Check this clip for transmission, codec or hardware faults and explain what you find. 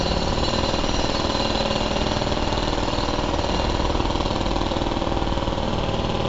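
One fault, and it runs the whole way through: 4-bit ADPCM compression. Each sample is coded as a coarse 4-bit step away from a predicted value, with the step size adapting as it goes, so the error becomes a gritty hiss that rides up and down with the level. Here it's heavy, with roughness on every loud moment and smeared attacks. Nothing comes through above 7.8 kHz, so the top is dull, which fits a 64 kbps stream.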